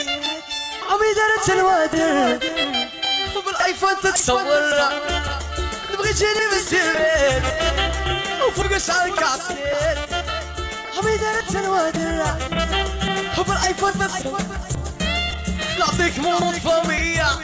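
From 1.81 s onward, the resampler restarted on every 10 ms block, so each edge errs: a 100 Hz buzz, with vertical spectrogram stripes.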